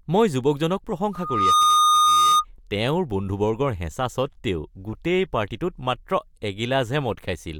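At 1.13 s a loudspeaker feedback squeal starts. A microphone is hearing its own loudspeaker, and the loop gain tops unity at 1.2 kHz. That tone swells in under half a second to about 10 dB above the speech. It holds until 2.45 s.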